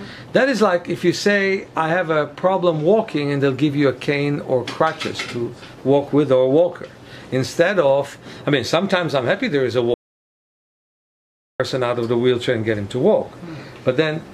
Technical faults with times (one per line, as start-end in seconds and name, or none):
9.94-11.60 audio dropout to silence